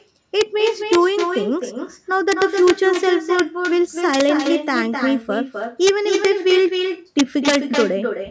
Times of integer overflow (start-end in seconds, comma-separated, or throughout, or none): 0.41, 0.93-0.95, 2.32-2.70, 3.39, 4.14-4.29, 5.87-5.89, 6.25, 7.19-7.55